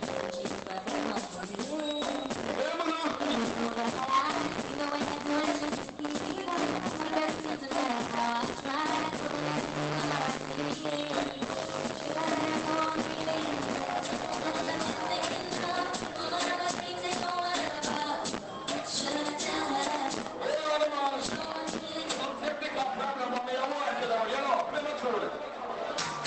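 Two faults stand out in this audio, which has come through an Opus call path that cuts off the top above about 8 kHz. First, a repeated buffer at 14.63 to 14.68 s and again at 16.21 to 16.24 s. New audio arrived late, so the device replayed its last block. Each block lasts about 11.6 ms, which fits a 512-sample buffer. The first spot repeats four extra times, the second three. Both are heard as a short stutter with hard joins. Second, a lost packet rebuilt from error correction, seven times: at 20.63, 20.69, 20.77, 20.83, 21.09, 21.25 and 21.43 s. Each covers 20 ms. The packets went missing, but the next packet carried a rough low-bitrate copy. The decoder played that copy instead. So there is no gap, just short patches that sound grainier and noisier.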